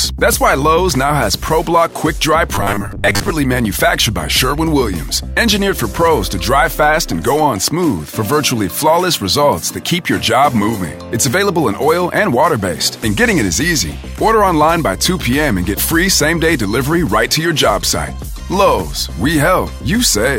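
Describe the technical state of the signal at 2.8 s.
At 2.8 s you're inside a stretch of robotic sound from repeated short buffers, 2.55 to 3.30 s: a rigid 100 Hz metallic buzz, likely from about half the audio being replaced by repeats of the last 10 ms.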